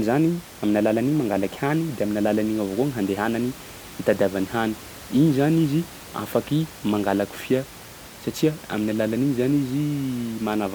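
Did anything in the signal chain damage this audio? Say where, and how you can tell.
No, nothing in the chain has damaged this speech; the only thing beneath it is the room's own background noise, sitting about 19 dB below the voice, which belongs to the recording itself rather than to any stage of the system.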